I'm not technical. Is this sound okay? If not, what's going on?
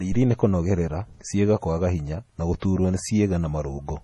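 No. MP3 compression damage runs through the whole recording, from start to finish. The sound is watery and swirly, the s sounds chirp metallically, and nothing comes through above 11.4 kHz, so it lacks crispness. This is likely from saving the speech as a heavily squeezed MP3. To save space, the encoder chopped off the treble and threw away quieter details, which flicker in and out moment to moment and blur the starts of sounds.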